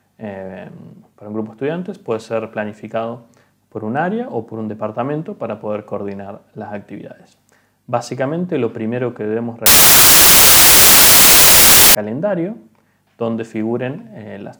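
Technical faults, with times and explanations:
9.66–11.95 s, samples built from the wrong bytes: the sound is abruptly swamped by loud, harsh broadband noise for about 2.3 seconds, then clears at once. The reader assembled each sample from mismatched bytes, whether shifted by one, swapped in order or misaligned. That promotes the rapidly fluctuating low-order bits into the dominant part of every value, so the waveform becomes broadband hiss.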